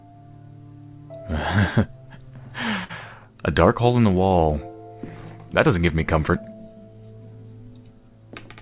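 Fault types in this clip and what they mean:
Short stall from a late packet: A packet arrived after it was due, so the jitter buffer ran empty. The receiver held the last sound rather than going silent, then carried on from the same point. Nothing is lost. The sound is just stretched. This happens twice, near 2.84 s and 4.27 s. The first hold lasts 54 ms, the second 31 ms. Each adds that much delay. Both show as a brief, unnatural sustain within the call band, which stops at 4 kHz.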